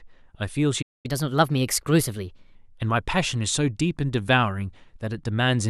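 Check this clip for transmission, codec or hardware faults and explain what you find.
Two playback faults affect the speech, both around the first second.

From 0.82 to 1.06 s, a playback stall: the speech halts into silence for about 0.22 s, then resumes, likely because the player ran short of data or its thread was blocked.

From 1.06 to 2.55 s, catch-up at higher speed: the speech runs 1.15 times fast and about two semitones high while the player resamples its backlog, then settles back to normal.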